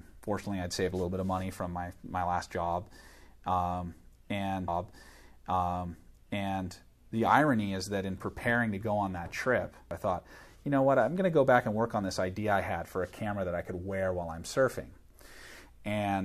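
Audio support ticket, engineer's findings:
Stream segment repeated, 4.67 to 6.69 s: roughly 2.02 s of audio plays a second time, small blip at the jump back. Player side, fetching or queuing the same segment twice, so the timeline runs about 2 s long from there.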